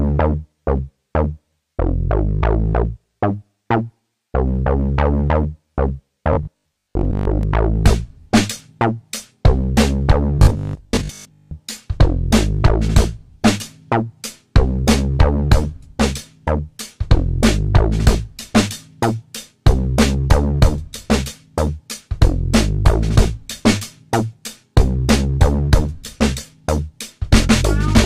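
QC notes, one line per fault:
6.33 to 7.43 s and 10.39 to 11.53 s, robotic sound from repeated short buffers: new audio is likely arriving too slowly, so playback covers the gaps by looping the most recent 20 ms chunk while the real material is dropped. Looping at that length stamps a steady 50 Hz buzz onto the sound, which turns rigid and metallic. Roughly half of the first stretch is repeated material, and most of the second.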